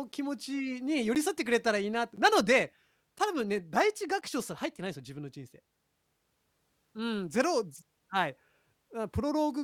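A background task blocking the USB bus or audio driver every 1.02 s causes periodic USB or driver dropouts from 0.12 s to 4.22 s. About five times, roughly 10 ms of the speech is replaced by silence, heard as evenly spaced ticks.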